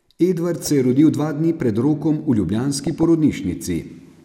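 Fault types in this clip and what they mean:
DAB burbling: residual bit errors corrupt single MP2 sub-bands, so brief noise blips sit over the speech at 0.63 s and 2.87–3.03 s, rather than the silent gaps of a dropout.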